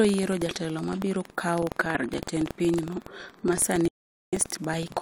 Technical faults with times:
0.00-5.01 buffer tearing
2.06 corrupt FLAC frame
3.59 corrupt FLAC frame
3.88-4.33 audio dropout to silence

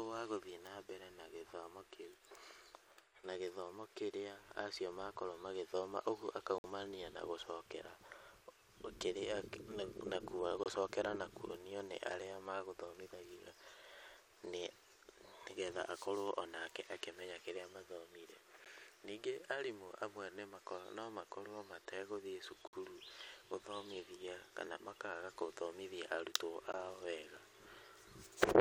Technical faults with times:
6.58-6.64 gap between stream segments
10.63-10.66 gap between stream segments
18.65 gap between stream segments
22.67-22.73 gap between stream segments
26.72 gap between stream segments

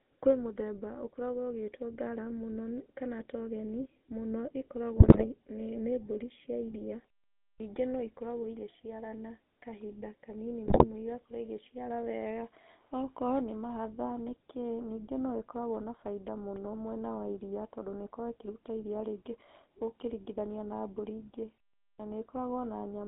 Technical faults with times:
0.00-23.07 GSM full-rate codec
4.96-5.26 GSM bit errors
7.53-7.60 clipped start after a pause
10.66-10.85 GSM bit errors
21.92-22.00 clipped start after a pause

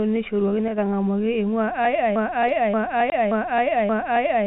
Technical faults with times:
0.68-0.78 sudden gain jump
2.16-4.46 broken-record loop
3.10-3.12 packet loss filled with silence

